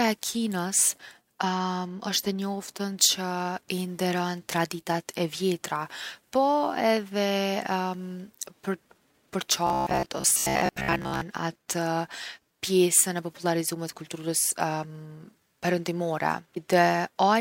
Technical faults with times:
9.67-11.21 robotic sound from repeated short buffers

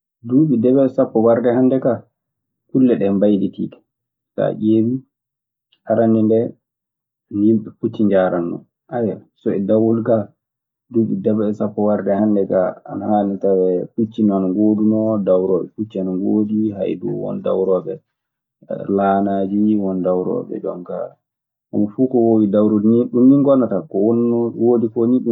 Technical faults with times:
none

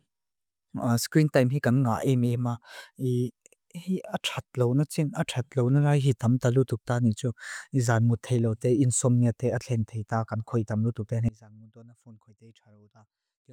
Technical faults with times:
11.29-13.52 audio dropout to a faint residue

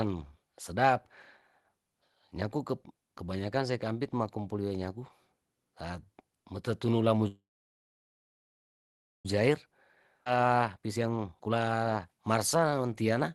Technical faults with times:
7.27-9.26 call audio freeze
10.25-10.27 skip ahead
10.30-13.30 jitter buffer speed-up

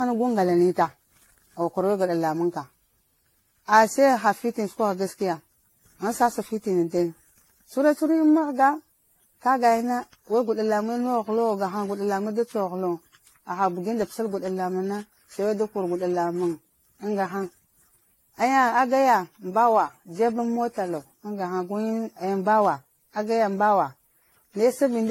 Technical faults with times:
0.00-25.11 generation loss

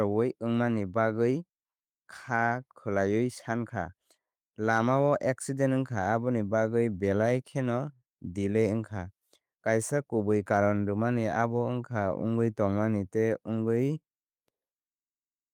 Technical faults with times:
none

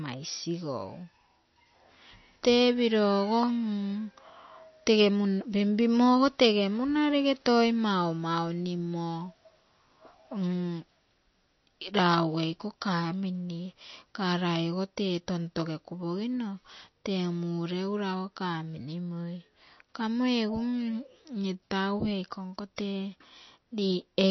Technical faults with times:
0.00-24.30 MP3 compression

